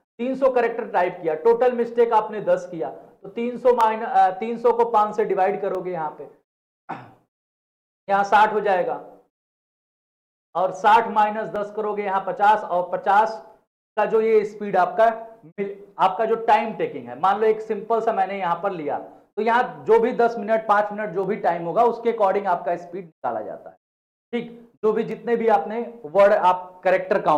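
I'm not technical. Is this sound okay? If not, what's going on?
No. From 1.87 s to 27.05 s a click recurs every 1.94 s, about fifteen in all. These are clock drift buffer slips, likely two devices running at slightly different speeds, so a tiny slice of sound periodically gets dropped or repeated.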